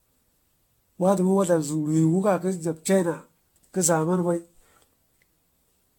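Throughout the speech, the sound is swirly, smeared and hollow, with blurred attacks and nothing above 17.5 kHz. This is likely generation loss: repeated AAC-LC passes, around ten, each requantising on a shifted frame grid. That explains artefacts worse than the roughly 96 kbit/s bitrate alone suggests.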